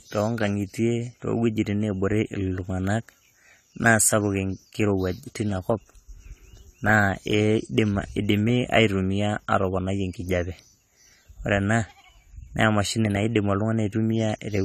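From start to finish the speech has most likely passed through AAC compression, with an AAC-LC encoder starved of bits, and the damage is plainly audible, pointing to a rate somewhere around 32 kbps. The encoder has discarded everything above 14 kHz and quantised the remaining bands coarsely, so the sound is dull and smeared, sibilants turn fizzy, and held vowels take on a warbling shimmer as the coding shifts from frame to frame.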